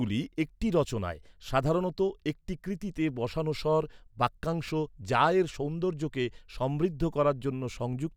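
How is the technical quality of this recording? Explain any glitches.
No glitches can be heard anywhere in this recording.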